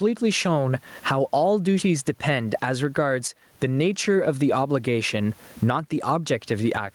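Gain pumping runs through the whole speech clip: the level swings by around 20 dB as a fast limiter clamps down on each loud syllable. The faint room noise sits about 44 dB under the speech. The likely cause is a microphone gain set far too high.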